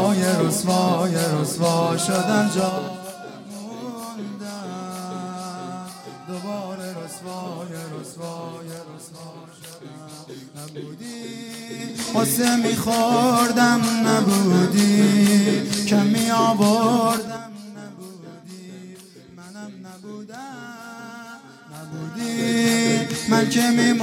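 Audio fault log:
2.60–2.97 s, 11.70–12.07 s, 17.09–17.46 s: zipper noise. The level jumps in raw 4 dB steps (5 dB the last time) about ten times a second, going down roughly 15 dB, up roughly 15 dB, then down roughly 20 dB. Each unsmoothed jump clicks, so you get a short ticking zip.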